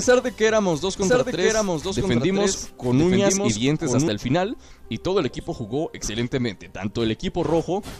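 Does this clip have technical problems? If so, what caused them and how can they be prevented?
Yes. A second, slower capture path or an out-of-step edit likely mixed the audio in twice, causing a doubled audio track from 1.02 to 4.08 s. A dry, full-band copy trails about one second behind, roughly 5 dB quieter, and starts and stops abruptly. To prevent it, route each source through one capture path only and check edits for overlapping duplicate regions.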